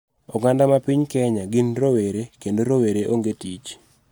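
No technical faults can be heard anywhere in this speech recording; the signal stays continuous and stable throughout.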